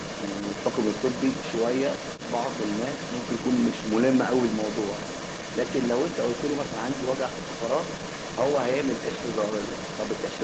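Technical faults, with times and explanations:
Throughout, other side's voice leaking through: a second, quieter voice sits about 10 dB below the main speech for the whole clip. This is likely the far end playing on the talker's loudspeaker, reaching the microphone and escaping the echo canceller.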